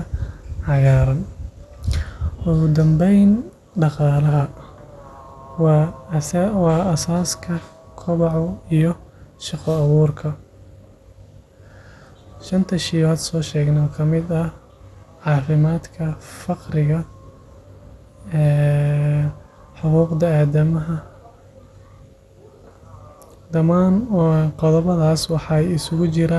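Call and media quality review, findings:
Dull, gurgly speech all the way through, nothing above 12.2 kHz. Likely MP2 compression starving the upper sub-bands, which fits a low rate around 80 kbps.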